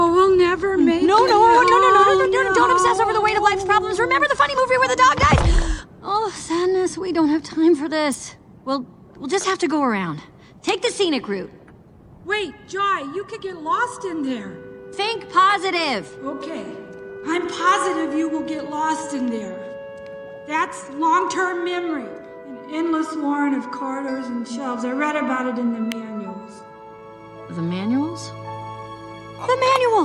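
A sharp snap rides on top of the sound from 8.12 to 8.14 s, a tight burst peaking at about -15 dBFS. A second, even briefer and louder crack follows at 25.92 s, reaching about -10 dBFS. Both are electrical switching spikes, most likely picked up from a nearby switch, motor or static discharge whose short arc coupled into the audio line and added its own click.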